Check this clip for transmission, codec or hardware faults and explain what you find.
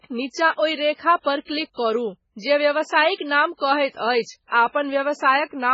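One codec fault runs through the whole speech clip: heavy MP3 compression is the likely cause. The sound has nothing above 7.6 kHz and a watery, swirling texture, with metallic chirps on s sounds and smeared consonant onsets. With bits this scarce, fitting a very low bitrate of around 16 kbps, the encoder cuts the treble at a fixed point and drops weak frequency lines that flicker on and off between frames. A spectrogram would show a flat ceiling at 7.6 kHz and speckled, holey patches below it.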